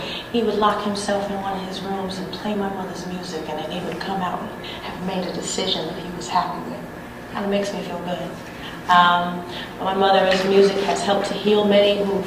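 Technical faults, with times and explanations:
10.46–12.2 s, train of clicks: around thirty similar sharp ticks at an uneven pace averaging 17.9 per second, peaking roughly 10 dB above the sound, likely interference or a faulty connection or power supply. Spectrograms show thin full-height vertical lines; waveforms show narrow, irregularly spaced spikes.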